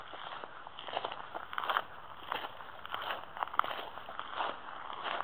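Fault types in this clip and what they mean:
Imaging from linear upsampling: Between about 1.32 and 4.13 s the top of the band goes dull, and a faint mirrored copy of the spectrum sits from 8 kHz up to 16 kHz, roughly 30 dB below the sound itself, adding a thin metallic shimmer. That fits a 16 kHz source raised to 48 kHz by joining samples with straight lines, a filter too gentle to remove those images.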